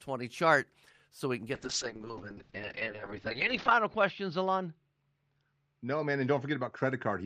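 From 1.54 s to the end of the speech, a call bitrate drop takes hold: the encoder's rate falls from 40 kbps to 7 kbps, sitting at the lowest level for about 2.2 s. With so few bits, Opus quantises the signal coarsely and narrows the coded band from 20 kHz down to 8 kHz. The speech loses its top end and turns muffled, with a rough, watery texture that persists through the rest of the clip.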